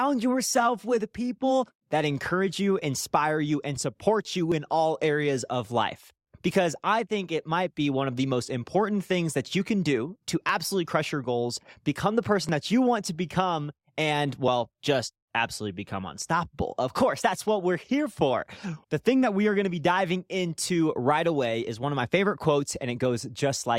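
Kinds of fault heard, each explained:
Overlap between stream segments: The speech arrives in chunks about 2 s long, and at eight joins a chunk's time stamps overlap the one before. The player trims that overlap, but the sound was never really doubled. So about 10 to 16 ms of real audio disappears at each of those joins, and the waveform jumps. You hear a tiny click or skip at 0.53, 2.53, 4.52, 6.51, 8.50, 10.49, 12.49 and 14.48 s, for example between "one of the most" and "important things that you".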